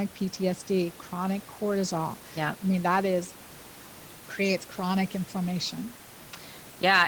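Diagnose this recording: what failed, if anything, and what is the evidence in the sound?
Nothing failed; room noise sits about 24 dB below speech.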